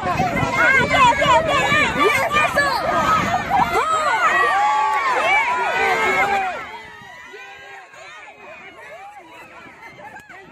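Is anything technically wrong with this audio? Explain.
Yes. From 6.24 to 6.92 s there is zipper noise: a drop of around 20 dB applied in unsmoothed 1 dB jumps, roughly fifty a second, each leaving a tiny click. This drop audibly buzzes and ticks as it falls.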